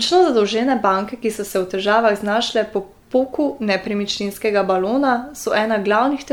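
Throughout the speech, the audio has likely been MP3-encoded around five times at rates near 95 kbit/s, each pass requantising on a shifted frame grid. This generation loss stacks noise and spectral holes, leaving a swirly, hollow, smeared sound with blurred attacks.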